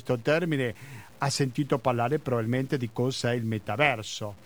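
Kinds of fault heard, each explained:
Low bit depth without dither: the speech was likely cut down to very few bits by truncation with no dither, a grain that fits 8-bit truncation. The rounding error tracks the signal instead of forming a steady hiss; it sits only about 30 dB below the speech and changes as the speech does, giving a gritty, grainy distortion across the whole clip that grows harsher as syllables fade and on the quietest parts.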